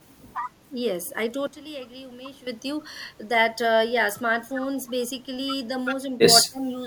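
From 1.47 to 2.47 s, a sudden gain jump drops speech and background noise together by about 14 dB, likely a digital gain step applied without a ramp. From 6.45 to 6.77 s, speech is suppressed in double talk, dipping by around 20 dB, likely because the echo canceller mistook it for loudspeaker echo.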